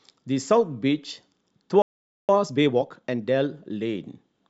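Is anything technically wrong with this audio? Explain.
Yes. At 1.82 s the speech stops dead for about 0.47 s, until 2.29 s, a playback stall. The likely cause is the player running short of data or its thread being blocked. The waveform shows a flat gap, and the spectrogram a blank vertical band.

From 2.29 to 3.21 s comes time-compressed catch-up: the player trims its backlog by splicing out short segments, so speech runs about 1.5 times fast at unchanged pitch. The spectrogram's harmonics keep their spacing while syllables crowd together.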